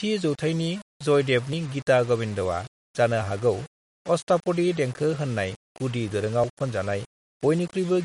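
Speech runs the full 8 seconds with a coarse, grainy distortion riding on every sound, sitting only about 25 dB below the signal and swelling and fading with it, which likely points to low bit depth without dither, near 6-bit rounding. Steady hiss from dither or a noisy preamp stays put during pauses, but this error tracks the signal. Layered over it is a watery, swirling texture with smeared consonant attacks and nothing above 11.1 kHz, likely the mark of MP3 compression at a low bitrate near 47 kbps. Unlike plain low-pass filtering, the weak frequency content flickers on and off.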